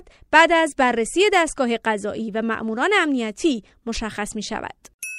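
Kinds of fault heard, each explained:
No faults can be heard.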